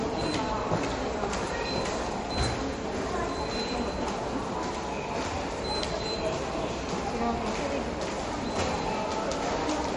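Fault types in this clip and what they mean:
MP3 compression: a hard ceiling at 10.6 kHz with plainly audible watery, swirling texture throughout, likely from low-bitrate MP3 coding near 40 kbps; unlike a plain low-pass filter, weak components flicker frame to frame and attacks smear.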